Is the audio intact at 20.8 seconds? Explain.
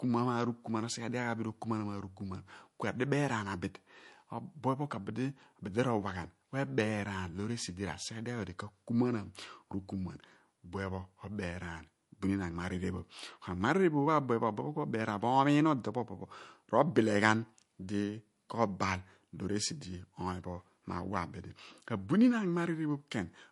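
No. At 20.8 s the speech carries the same damage heard throughout: nothing above 11.3 kHz, plus a watery, swirly shimmer on s sounds. That is likely MP3 compression at a low bitrate, around 48 kbps, where weak frequency lines drop in and out between frames. The flickering swirl is what separates it from a plain low-pass filter.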